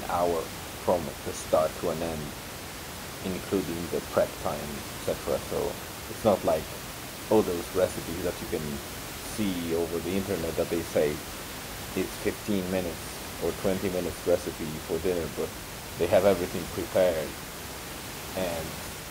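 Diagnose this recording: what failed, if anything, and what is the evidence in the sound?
Nothing in the chain has failed: the speech is intact at every stage, and the only other sound is the room's own background noise sitting about 10 dB below it, which belongs to the recording rather than to any fault.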